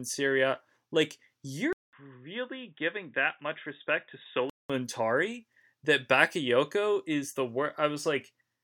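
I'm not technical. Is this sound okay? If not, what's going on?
No. From 1.73 to 4.70 s the voice turns muffled and a bit quieter after a brief gap, likely an input switched to a poorer device.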